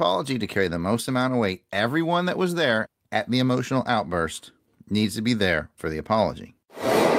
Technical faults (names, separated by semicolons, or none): none